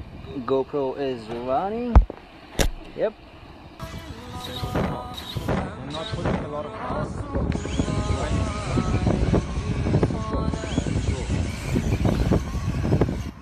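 From 5.49 s to 11.49 s the sound switches abruptly, with no gap, to an adaptive stream at a lower bitrate. The drop is likely from about 96 to 32 kbit/s AAC. Treble disappears above 10 kHz and codec artefacts thicken. At 11.49 s the fuller sound returns just as suddenly.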